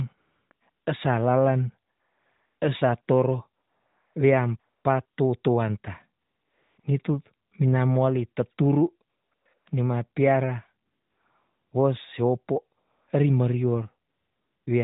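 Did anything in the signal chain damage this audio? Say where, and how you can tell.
Yes, at the codec: AMR comfort noise fills gaps from 0.18 to 14.66 s, 40 ms to 0.86 s each. With no speech frames sent, smooth synthetic hiss replaces the real background.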